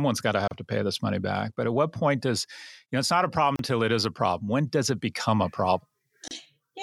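Speech runs along and then drops into brief silences at 0.48 to 0.51 s, 3.56 to 3.59 s and 6.28 to 6.31 s, each about 30 to 34 ms long, before resuming exactly where it stopped. These are gaps at joins of encoded pieces: separately encoded segments were joined without trimming, so each encoder's start-up delay and final-frame padding remain as dead air, with the cut edges smeared by the codec.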